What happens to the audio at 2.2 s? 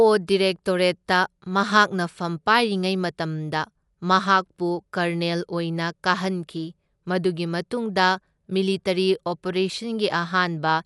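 At 2.2 s the speech sounds dull and rough, as it does throughout. Nothing sounds above 11.4 kHz. This is likely Dolby Digital compression, fitting about 64 kbps.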